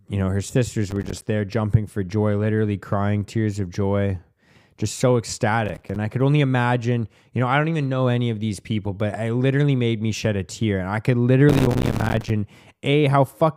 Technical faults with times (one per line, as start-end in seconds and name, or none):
0.91-1.27 processor overload crackle
5.66-5.96 processor overload crackle
11.49-12.30 processor overload crackle